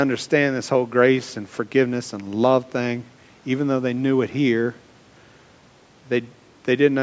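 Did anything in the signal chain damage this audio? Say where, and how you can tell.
No, nothing in the chain damaged this speech.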